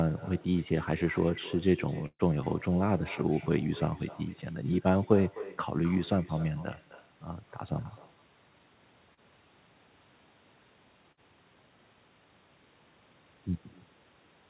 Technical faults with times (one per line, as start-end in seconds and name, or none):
0.00-14.49 echo with no canceller
2.06-2.22 burst of packet loss
9.14-9.20 short concealed packet loss
11.12-11.20 burst of packet loss